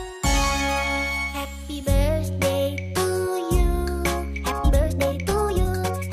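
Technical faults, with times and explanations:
4.29–6.12 s, time-stretched section: the pace suddenly runs 1.97 times faster while pitch stays put, so the sound turns rushed, likely from software dropping short pieces. A spectrogram shows harmonics at unchanged heights but crowded events; the waveform shows abrupt joins.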